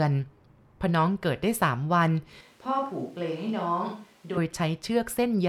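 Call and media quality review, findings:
Speech turns abruptly roomy and hollow, bass thinned, level down about 5 dB, room noise rising to roughly 30 dB below speech, 2.41–4.37 s; sudden return after. Likely switch to a distant microphone, close mic dropped, farther pickup substituted.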